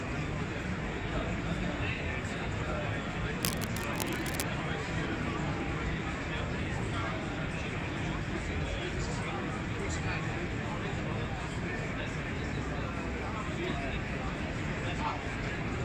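Cable scratch noise runs from 3.43 to 4.43 s, a full second of dense, irregular crackle and rustle laid over the sound, sitting only a little below the level of the audio itself. The likely cause is a worn cable, plug or control being disturbed, so that its contact resistance jumps about rapidly and injects uneven bursts of noise into the signal path. The scratching stops at 4.43 s.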